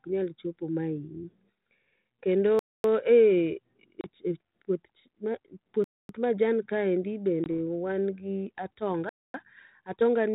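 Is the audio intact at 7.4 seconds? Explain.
No, there's packet loss on an ADPCM call at 7.44 to 7.46 s: about two packets vanish into a hard silent gap, and the out-of-step predictor makes the speech return slightly distorted.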